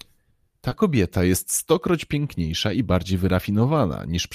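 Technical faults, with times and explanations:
0.69–0.73 s: short concealed packet loss. About 20 ms of speech failed to arrive in time, and the receiver filled the gap by extending the preceding sound before crossfading back into real audio, which leaves a brief smear or wobble across the 40 ms span.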